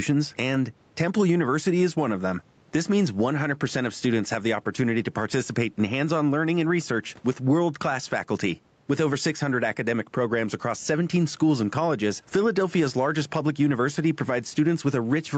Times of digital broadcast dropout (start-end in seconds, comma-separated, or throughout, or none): none